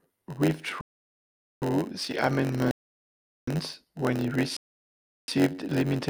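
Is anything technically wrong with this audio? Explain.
Yes. Throughout the speech there is a block size mismatch (padded): one stage writes shorter blocks than the next reads and zero-fills the remainder, producing a steady 91.9 Hz buzz and a 0.919× slowdown at near-normal pitch.

There are three rebuffering stalls, where the player ran dry and paused until more audio arrived. Each drops to silence and then resumes exactly where it left off, adding time without losing anything. The first runs from 0.81 to 1.62 s and adds 743 ms. The second runs from 2.71 to 3.48 s, adds 702 ms, and resumes on "when it". The third runs from 4.57 to 5.28 s, comes right after "when it", and adds 657 ms.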